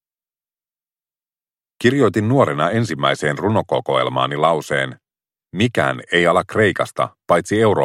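Nothing technical jumps out here, and the sound just carries on without a hitch from beginning to end.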